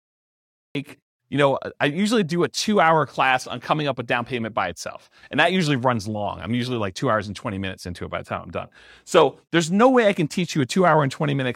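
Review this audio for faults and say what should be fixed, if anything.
Cut-off start: the speech clip opens with digital silence from 0.0 to 0.75 s, then the audio cuts in abruptly mid-sound at 0.75 s with no natural attack or fade, because capture began after the sound was already under way. To prevent it, start recording or streaming with a short pre-roll before the first sound.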